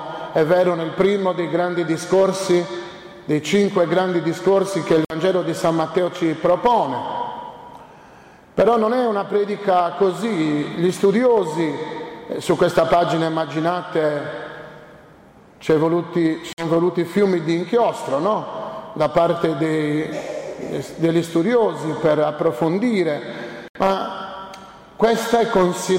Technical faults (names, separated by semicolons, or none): Bluetooth stall